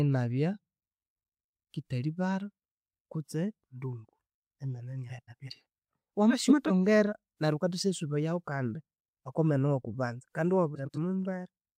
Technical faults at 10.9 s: frames out of order

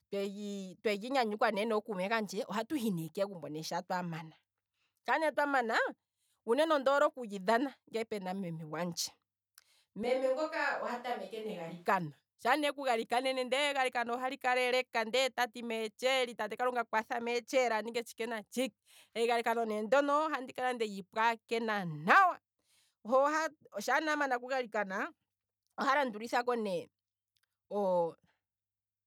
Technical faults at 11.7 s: switch to a distant microphone

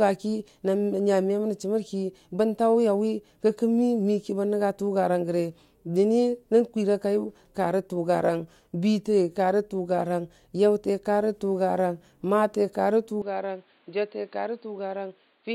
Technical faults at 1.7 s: none

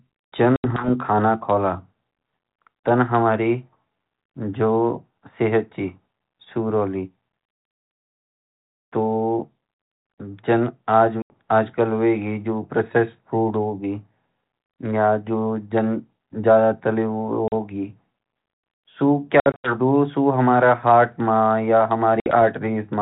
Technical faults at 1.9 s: none

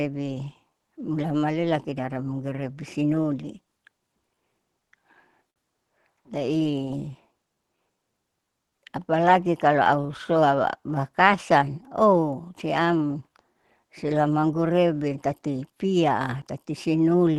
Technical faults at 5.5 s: clock drift between sender and receiver; repeated timing corrections; short stall from a late packet

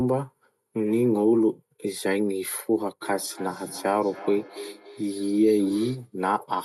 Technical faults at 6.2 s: feedback echo between two devices

